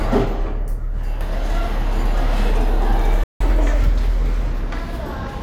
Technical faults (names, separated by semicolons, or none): playback stall; catch-up at higher speed